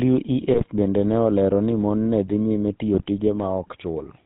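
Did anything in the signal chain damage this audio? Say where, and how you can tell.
Yes. At the codec stage, the GSM full-rate codec runs throughout. Pulse-driven vocal-tract modelling gives a buzzy, gravelly roughness, and nothing comes through above 4 kHz.

On the radio link, GSM bit errors hit 0.54–0.66 s, before "bende ne olero ni", and 2.94–3.05 s, after "mon ne dhi nyime". Corrupted filter, pitch and gain values cause squawks and gargling.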